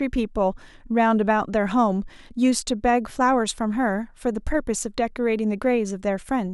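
No technical faults can be heard anywhere in this speech recording.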